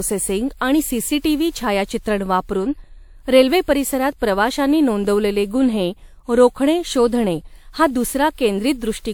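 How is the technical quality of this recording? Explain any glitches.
The technical quality is compromised by one fault that runs the whole length of the speech. Throughout, the sound has a swirly, smeared and hollow character, with consonant attacks softened and blurred, though the top end still reaches about 20.1 kHz. That combination points to generation loss, most likely from the audio being encoded and decoded around four times with a lossy codec, which fits WMA at 128 kbit/s. Each pass quantised the signal on a shifted frame grid, so noise piled up beyond what that bitrate alone would produce.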